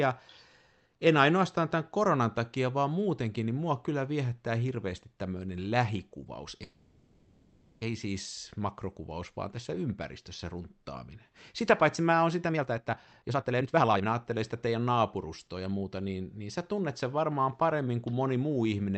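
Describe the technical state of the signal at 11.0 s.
At 11.0 s the speech comes through intact, with no fault to hear beyond the ordinary coding of the call path, whose audio tops out around 8 kHz.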